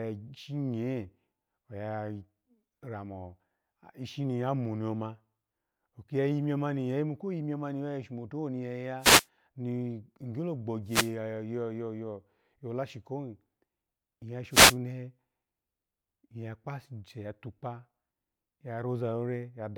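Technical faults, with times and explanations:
8.99–9.27 s, 10.86–11.13 s and 14.50–14.77 s: wireless microphone noise hits. Three bursts of static, each lasting about 0.28 s. The analogue FM radio link fades as reflected signals cancel at the receiver, and receiver noise surges until the signal recovers, producing a swish. On a spectrogram each hit appears as a short vertical band of broadband hiss across the speech harmonics; on the waveform the noise fills the envelope.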